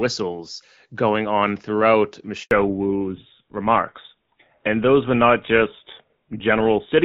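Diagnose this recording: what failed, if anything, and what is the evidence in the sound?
Network stage: right after "going on throughout" the speech cuts out at 2.43 s and stays silent until 2.51 s, an 80 ms handover gap. The call was being switched between networks, and no speech frames arrived until the new link came up.

Codec stage, following the handover: from 2.51 s to the end the audio has nothing above 4 kHz and sounds duller and rougher. That's a fallback to narrowband. Before the switch it sounds like HD Voice at roughly AMR-WB 12.65 kbit/s, and afterwards it fits GSM full rate.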